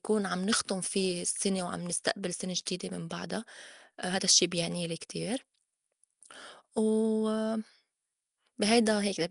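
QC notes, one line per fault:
throughout: Nellymoser compression. The speech carries a rough, hissy haze around every syllable and a smeared, underwater colour, with nothing at all above about 10.6 kHz. This sounds like block-based coding at a fixed, coarse resolution, where bands too weak to earn bits are replaced by noise instead of real detail, so the fizz comes from that filler. The character most likely points to Flash's Nellymoser Asao codec, and the damage is plainly audible.
2.66 s and 8.86 s: pre-echo. At 2.66 s, right after "سنة وعم نستقبل سنة", a short hiss arrives about 12 ms before a sharp onset, and at 8.86 s the same thing happens over about 10 ms, leaving both attacks soft and smeared. Each onset falls late in a coding block, so the noise allowance sized for the loud attack is spread across the whole block and leaks into the quiet moment before it.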